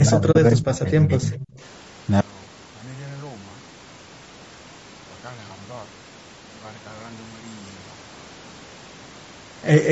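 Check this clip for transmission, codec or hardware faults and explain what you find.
Four faults are audible in this speech clip: one runs through the whole recording, and three fall within its first second and a half.

Low-delay AAC compression, throughout: short codec frames resolve pitch harmonics poorly at a low bitrate. The speech sounds rough and grainy, with noise filling the gaps between harmonics, and the character likely points to AAC-ELD at around 32 kbps. Nothing is heard above about 8 kHz, which is the normal band limit of the call's microphone processing.

Speech suppressed in double talk, 0.0 to 1.38 s: the echo canceller likely confused the near talker with loudspeaker echo while both sides spoke, and turned everything down. For about one and a half seconds the speech dips and thins, falling by roughly 20 dB at its deepest.

AAC frame loss with muting, 0.31 to 0.36 s: the decoder zeroed the missing spectrum, and overlapping windows faded the sound out and back in. 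This leaves a soft-edged 40 ms hole, which fits two lost frames.

Echo leak, 1.34 to 1.47 s: the loudspeaker side's echo canceller likely failed to remove all of the loudspeaker sound its microphone picked up, so some was sent back. A faint copy of the speech arrives 242 ms late, about 20 dB below the direct sound.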